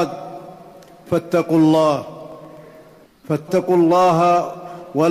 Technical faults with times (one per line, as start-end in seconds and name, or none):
1.94-2.70 CD scratch ticks